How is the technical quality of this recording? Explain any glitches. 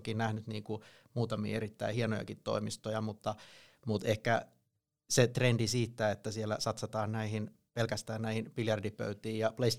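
The technical quality of this recording is sound, with no glitches to explain.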